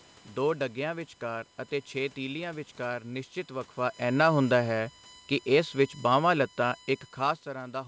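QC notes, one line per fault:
Throughout: USB whine. A steady whine sits about 25 dB below the speech, built on 1 kHz and loudest at 8 kHz, from USB frame timing leaking through power or ground.
4.02–7.52 s: automatic gain falling. Gain eases down by about 4 dB, so speech and room noise sink together as the control reacts to an input it judged too loud or too noisy for its starting gain.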